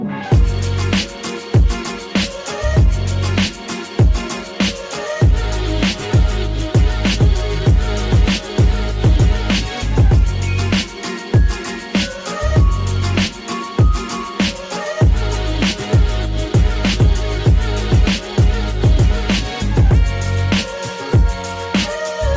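No technical faults can be heard; the audio carries the mark of a wideband call path, with nothing above 8 kHz, which fits a G.722 codec.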